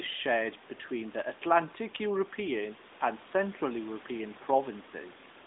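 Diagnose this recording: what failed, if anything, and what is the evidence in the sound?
Nothing has failed: the speech carries the narrow 200 Hz to 3.7 kHz band and mild coding texture expected of an AMR narrowband mobile codec at its 12.2 kbps mode, and the room noise sits about 22 dB below the speech as part of the original recording.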